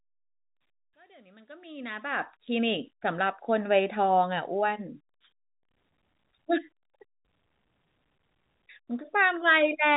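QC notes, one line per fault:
No faults found; the speech fades in smoothly up to 2.4 s and stays within a telephone band topping out at 3.8 kHz, consistent with G.711 A-law coding at 64 kbps.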